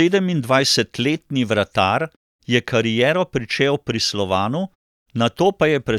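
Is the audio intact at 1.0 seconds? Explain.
Yes, the speech is intact at 1.0 seconds, with no fault present at that moment.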